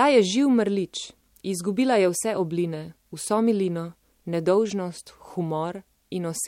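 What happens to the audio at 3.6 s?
Nothing goes wrong at 3.6 s: the speech carries on without any audible fault.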